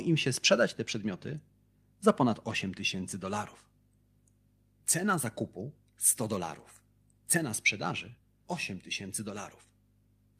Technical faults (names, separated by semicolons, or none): lost packet rebuilt from error correction